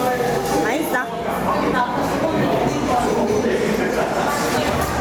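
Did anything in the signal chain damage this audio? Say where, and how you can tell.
Yes, there's gain pumping all the way through. The level is pulled down on loud sounds with a swing of roughly ten decibels, so everything sounds squashed. The likely cause is input gain set far too hot, with a fast limiter or compressor at the processing stage clamping it down on each peak.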